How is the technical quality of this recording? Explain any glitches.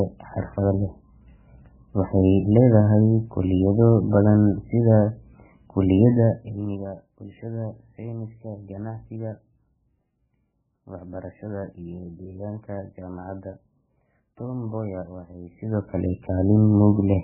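The technical quality is poor. There is one fault, and it runs through the whole clip.

Heavy MP3 compression damage affects the speech throughout. Nothing is left above 3 kHz. The sound is watery and swirly. Short of bits, the encoder drops weaker frequency detail, which flickers between frames. This likely points to a very low bitrate, around 8 kbps.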